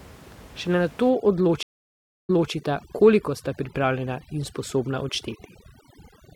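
A speech recording, with room noise about 23 dB below the voice, is hit by overdone noise removal from 1.09 s to the end. The denoiser is set so aggressively that it pulls down frequency bands sitting near its noise estimate, leaving a near-silent background with twinkling specks. Between 1.63 and 2.52 s a stream reconnect drops the audio for 0.66 s. When playback resumes on a fresh decoder, it restarts about 0.23 s earlier, so a short stretch of speech repeats.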